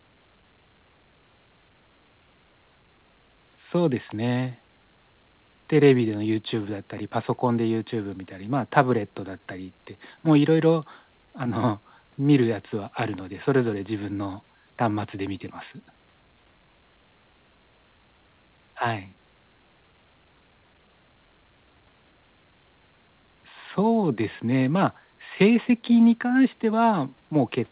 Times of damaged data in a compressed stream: none

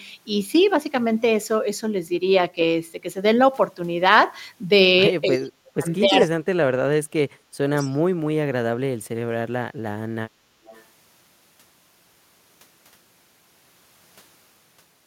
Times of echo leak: 5.87-6.27, 7.83-7.88, 10.65-10.84

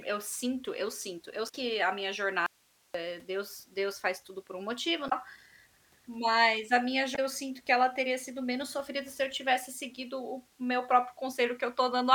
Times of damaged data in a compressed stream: 1.45-1.55, 5.06-5.13, 7.12-7.19

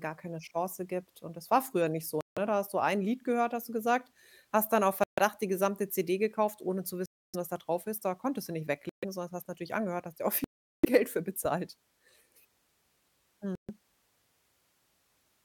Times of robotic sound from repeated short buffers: none

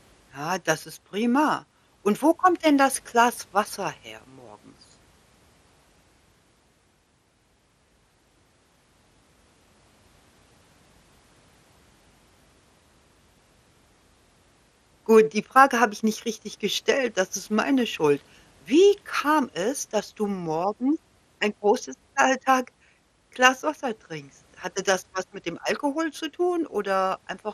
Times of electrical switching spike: none

